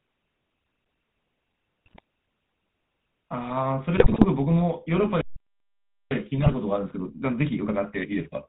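Throughout, the speech has the buzzy, gravelly roughness of the GSM full-rate codec. Nothing comes through above 4 kHz, which fits 13 kbps GSM coding.

From 1.86 to 2.00 s, GSM bit errors break the voice into squawks and gargling. Corrupted decoder values distort the spectrum and level. The same happens from 3.96 to 4.25 s.

At 5.21 s the sound cuts out mid-flow for about 0.9 s. This is a playback stall, likely from the player running short of data.

From 6.11 s to the end, time-compressed catch-up hurries the speech to 1.15 times normal speed. Pitch is unchanged. Within it, from 6.38 to 6.55 s, further GSM bit errors add pops and gargling.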